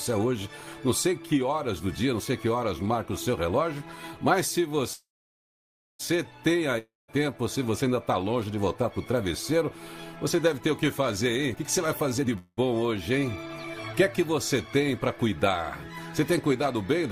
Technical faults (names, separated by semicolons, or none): call audio freeze; long network dropout; jitter buffer speed-up